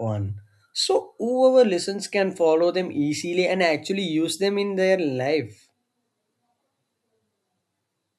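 Listening through the speech turned up nothing that stood out.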